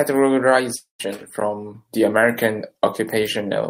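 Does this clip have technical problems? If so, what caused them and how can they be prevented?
Yes. A long network dropout at 0.75–1.01 s, before "from the", fades into a buzz or hiss, then silence, likely from lost packets, leaving about 240 ms missing. A steadier connection with a larger jitter buffer or packet redundancy would prevent it.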